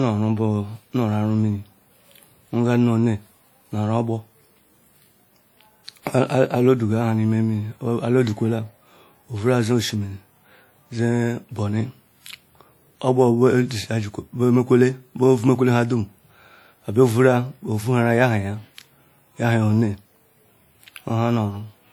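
Throughout the speech there is plainly audible WMA compression damage, likely from a low-bitrate transform encoder, around 48 kbps. Quantisation noise smears across long blocks, giving a ringing, washy texture and a hiss that swells and fades with the signal, although content extends to about 20.1 kHz.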